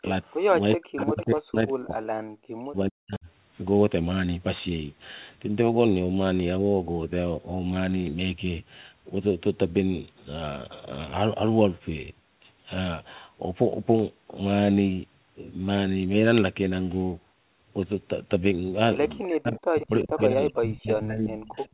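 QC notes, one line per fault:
0.00–0.05, 0.76–3.26 and 19.24 to the end, speech suppressed in double talk: level drops by up to about 40 dB in bursts while both sides talk, likely the echo canceller ducking the near talker too, unlike a steady fade.
0.03–0.36, 0.98–1.25, 19.81–19.86, 20.18–20.22 and 21.40–21.69, echo leak: faint copies of the voice trail 380 ms behind, about 15 to 25 dB down, likely residual loudspeaker echo rather than reverberation, which would decay smoothly instead.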